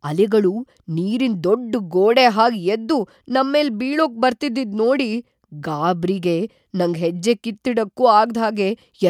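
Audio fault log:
No faults detected in the speech audio at any point.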